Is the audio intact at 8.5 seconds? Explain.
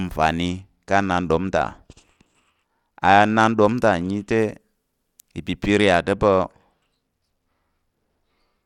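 No. At 8.5 seconds the speech is inside a Bluetooth SBC bit pool drop, which runs from 5.66 s to the end of the clip. The link squeezed the encoder's bit budget. This fits a fall in bit pool from 31 to 13, near 94 kbps. The top sub-bands lose their bits and the rest are coarsely quantised. The treble sounds dull and a gritty noise rides on the speech.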